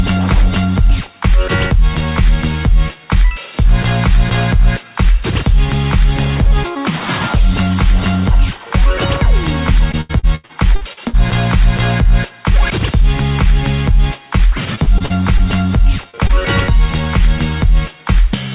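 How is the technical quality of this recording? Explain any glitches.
The recording has audible transmission damage from lost audio packets. It passed through a telephone-band call path with nothing above 4 kHz, which fits G.711 mu-law coding.

From 9.92 to 11.15 s and from 14.75 to 15.41 s there is repeated packet loss (robotic sound). Holes of up to 83 ms and 37 ms recur, each patched by extending the previous sound, giving choppy stretches with pieces missing.

From 16.11 to 16.15 s and from 16.27 to 16.31 s there is short concealed packet loss. Each roughly 20 ms hole is filled by continuing the prior sound, producing a brief smear or wobble.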